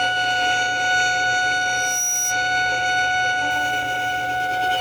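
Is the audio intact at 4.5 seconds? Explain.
No, a grainy hiss rides on the sound from 3.51 s to the end, louder on loud, bright passages: sample clock jitter of several microseconds leaves errors about 25 dB below the signal.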